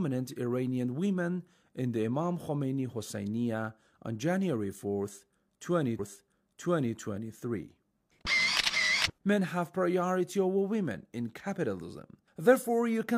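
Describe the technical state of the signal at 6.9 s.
At 6.9 s the audio is replaying material: from 5.95 s to 6.92 s, 975 ms of programme plays a second time, with a small blip at the jump back. This is a stream segment repeated, where the player fetched or queued the same piece twice.

Underneath, faint regular ticks about every 0.05 s form a soft rattle from 0.10 s to 13.17 s. These clock slip clicks most likely come from two unsynchronised clocks around 400 ppm apart, each slip dropping or repeating a single sample.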